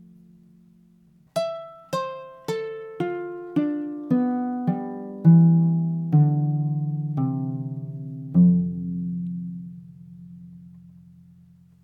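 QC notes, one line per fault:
0.14–11.79 s, clock slip clicks: a soft, steady rattle of ticks about every 50 ms, likely unsynchronised clocks around 400 ppm apart, each slip dropping or repeating one sample.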